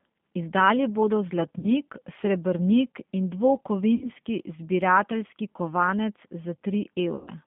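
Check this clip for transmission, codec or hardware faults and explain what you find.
Two faults are audible: G.729 codec coloration throughout, and three concealed packet losses.

Throughout the clip, the G.729 codec at 8 kbit/s rebuilds the speech from a filter, a pitch predictor and sparse pulses, keeping only 150 Hz to 3.5 kHz. The result is thin, rough and plainly synthetic.

VoIP packet loss, concealed by the speech codec, occurs at 1.59–1.67 s just before "srebrnik in", at 3.95–4.10 s just before "zbirateljski kovanec", and at 7.16–7.30 s. The losses last about 40, 60 and 110 ms, fitting runs of lost 10 ms frames. Each time, the decoder extrapolates its last pitch and filter, so the speech stretches into a fading buzzy tone or coloured noise and sounds weak briefly afterwards.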